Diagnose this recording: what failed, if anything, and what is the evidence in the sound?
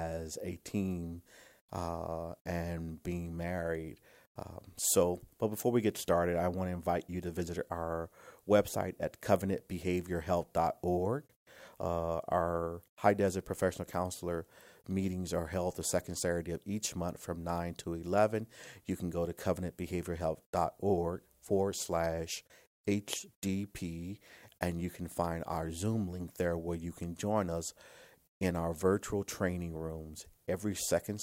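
Nothing in this speech recording points to a failure at any stage of the chain. No event in the sound calls for a diagnosis.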